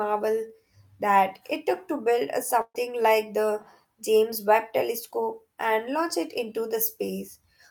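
At 2.61 to 2.76 s, after "took to build a", a burst of packet loss drops about 140 ms. Concealment stretches the last sound, fading it, before "like the" resumes.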